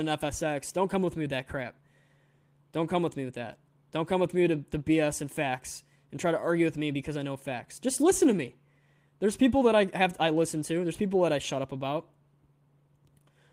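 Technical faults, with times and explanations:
No technical faults can be heard in this clip.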